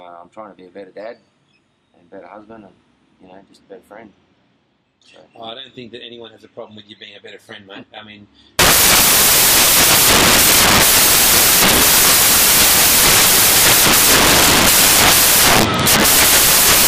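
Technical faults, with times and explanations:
8.59–16.87 s, samples built from the wrong bytes: sudden loud, harsh broadband noise to the end, as sample bytes are misassembled and low bits dominate.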